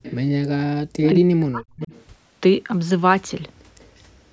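An echo leak at 0.03–0.15 s, likely from a loudspeaker whose echo canceller let far-end sound back into the microphone, adds a copy of the speech about 158 ms late and roughly 20 dB quieter. It returns at 1.03–1.09 s, now 194 ms late and nearly as loud as the speech itself.

From 1.11 to 1.92 s comes speech suppressed in double talk. With both sides talking at once, the canceller likely could not separate the local talker from the echo and turned both down. The speech dips by as much as about 40 dB and breaks up over roughly 0.7 s in total.

The leak comes back faintly at 1.82–2.02 s and 3.79–4.01 s, 194 ms late and about 35 dB down, heard only as a trace beneath speech that stops at 8 kHz.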